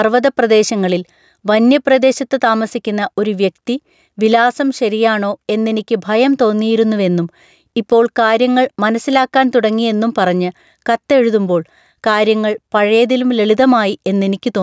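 Gain pumping runs through the whole clip. The input gain was likely set far too high for the microphone, so a fast limiter or compressor clamps down on every loud syllable and then lets go. The gain swings by roughly 5 dB, and the level between loud and quiet passages is squashed closer together. The call's microphone processing tops out at 8 kHz, which is ordinary for such a path.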